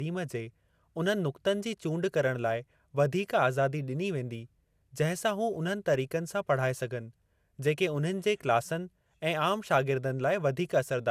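From start to finish the speech has a swirly, hollow quality with smeared consonant attacks, most likely generation loss from repeated lossy coding, around seven passes in a chain that fits MP2 at 128 kbit/s. Each re-encode quantised on a shifted frame grid, so errors stacked. A spectrogram shows nothing above 15.9 kHz, plus blotchy noise through the upper bands, while the waveform's transient edges look softened.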